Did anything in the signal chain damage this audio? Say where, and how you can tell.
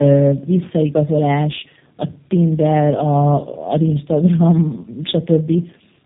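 Yes. The damage is at the codec stage and runs throughout. The speech sounds rough, muffled and warbly, with nothing above 3.8 kHz. This is tandem speech coding. Two low-rate speech codecs in a row, fitting AMR-NB then G.729A, with the second re-coding the first's degraded output.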